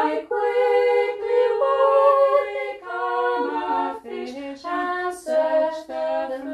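Nothing stood out on listening to this audio.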